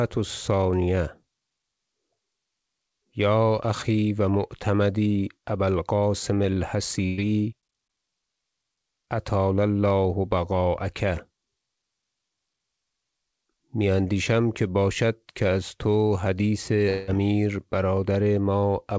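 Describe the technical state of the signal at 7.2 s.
A held buzz or fading hiss fills 7.06 to 7.20 s, then the speech jumps ahead: a burst of packet loss, concealed by extending the last sound while roughly 120 ms goes missing.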